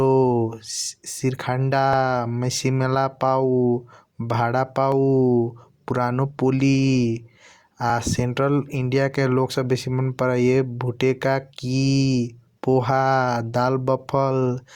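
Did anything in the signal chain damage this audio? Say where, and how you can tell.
Yes, at the stream stitching stage: overlap between stream segments. Tiny clicks or skips land at 1.93, 3.93, 4.92, 5.91 and 7.90 s, all on the 1 s segment grid. Overlapping timestamps got trimmed from real audio, so a few milliseconds vanish and the waveform jumps.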